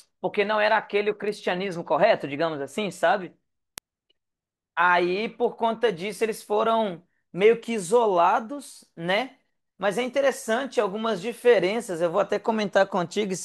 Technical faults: word clock ticks

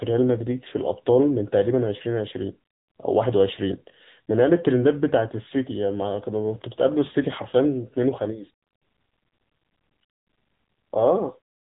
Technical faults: AMR narrowband mobile codec

